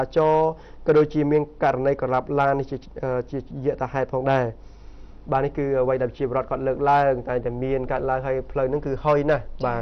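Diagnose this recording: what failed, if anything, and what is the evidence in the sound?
Nothing in this recording points to a failure at any stage of the chain. The sound gives no evidence of a fault to trace back to a mechanism.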